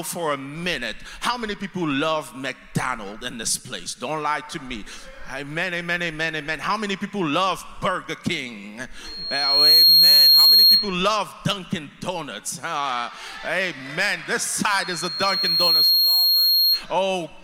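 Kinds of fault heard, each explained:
Loudspeaker feedback squeal: the microphone picks up its own loudspeaker. A 4.3 kHz tone swells up within about a second, at 9.0 and 14.8 s.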